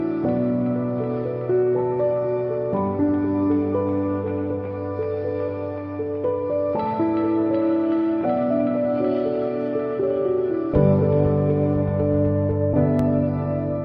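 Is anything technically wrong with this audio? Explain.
Yes. A loud pop at 12.99 to 13.02 s: a single sharp transient peaks roughly 5 dB above the surrounding sound, which continues beneath it. It is likely a brief voltage step, from a switch, plug or static discharge, entering the signal path.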